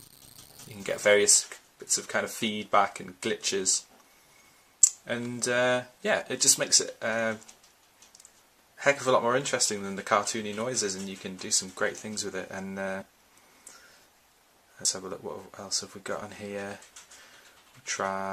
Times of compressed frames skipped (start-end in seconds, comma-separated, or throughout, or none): 13.01, 14.82-14.85